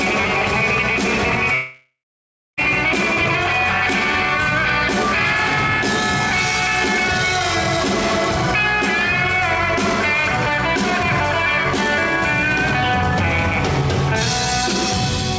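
From 1.54 to 2.59 s the sound stops arriving, likely a long network dropout: the last sound is stretched into a fading buzz, about 0.65 s of it is silence, and playback resumes with roughly a second skipped. Unlike a short packet-loss glitch, this gap is long enough to decay fully to silence. Nothing above 8 kHz is present, which fits a G.722 call codec at 64 kbps.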